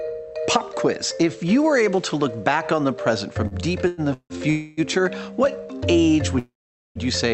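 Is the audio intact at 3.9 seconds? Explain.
No. A call audio freeze runs from 3.87 to 4.01 s: the last sound is stretched into a fading buzz or hiss for about 0.1 s, likely from delayed packets draining the jitter buffer. Unlike a dropout, nothing is lost; the audio resumes exactly where it stopped, just later.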